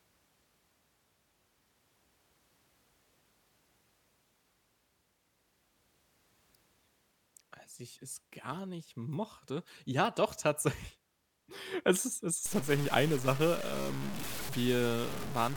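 From 12.46 s, just after "ist es", to 15.56 s, speech turns grainy from low bit depth without dither, likely undithered truncation fitting about 5 bits. Distortion tracks the voice, roughly 10 dB down. The waveform shows stair steps, and the spectrogram shows broadband grit following syllables.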